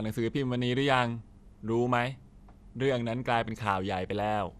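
Speech that sounds dull and gurgling from start to finish, with a granular roughness and nothing above about 14.4 kHz. The likely cause is MP2 compression at a low rate, fitting roughly 80 kbps, where starved upper sub-bands drop out and the remaining bands are coarsely quantised.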